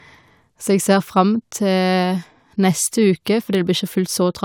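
Nothing in this stretch of speech stands out as a technical fault, so there's nothing here to pin to a particular moment.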